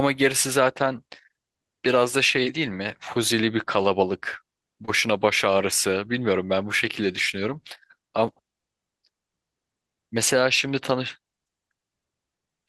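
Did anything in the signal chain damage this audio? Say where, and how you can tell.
Yes. At the network stage, a short concealed packet loss hits the speech at 4.85 to 4.90 s. About 20 ms of audio arrived too late to decode. The receiver synthesised roughly 21 ms from the preceding sound, then crossfaded back. That leaves a brief smeared patch.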